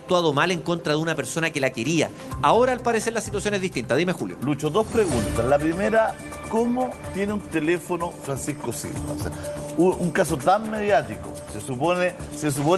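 Nothing here goes wrong; the audio has simply come over a WebRTC call path, so it carries the usual coding texture of an Opus-style codec and its top end stops around 12 kHz.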